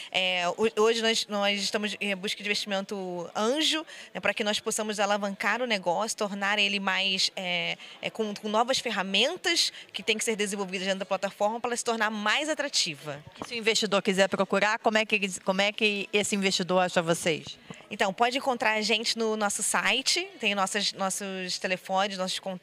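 Nothing in the audio stands out as a technical problem; there's no point anywhere along it that catches the ear as having gone wrong.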